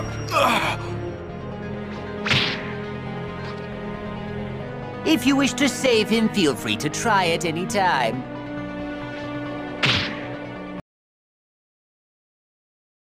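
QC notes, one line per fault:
10.80 s to end: audio dropout to silence. The sound cuts off mid-flow and never returns, leaving silence with no room tone, likely from a lost input or stray mute while recording continued. The waveform shows a flat line and the spectrogram goes blank.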